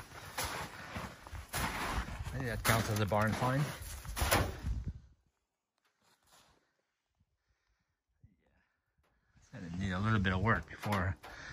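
From 4.70 to 5.10 s, a rapid ticking rides on the sound as it drops by roughly 25 dB. This is zipper noise. The fade was applied in coarse jumps of about 2 dB, some forty times a second, with no smoothing between them, so each jump leaves a small click in the waveform.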